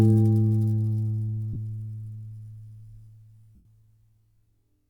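At 1.53 to 1.56 s a brief noisy smear replaces the sound, and at 3.55 to 3.65 s a longer smear fades toward silence. These are lost LE Audio frames: the LC3 decoder filled each gap by repeating the last spectrum with random signs, fading it as the loss went on.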